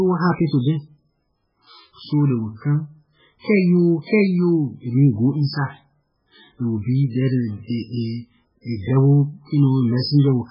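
From start to finish the speech is band-limited, with nothing above about 5.3 kHz, and carries heavy codec damage: a watery, swirling texture, metallic chirps on s sounds, and smeared consonant onsets. The likely cause is MP3 compression at a very low bitrate, around 8 kbps. Starved of bits, the encoder removed the treble at a fixed cutoff and zeroed weaker frequency lines, which flicker on and off between frames.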